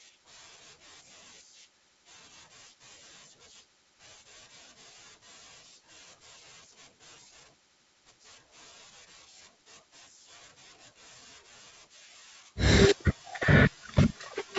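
No technical faults are audible.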